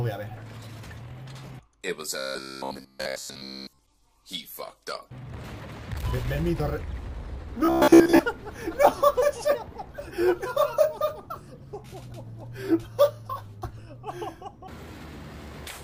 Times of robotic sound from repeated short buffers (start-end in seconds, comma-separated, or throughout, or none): 2.19-3.79, 7.65-8.19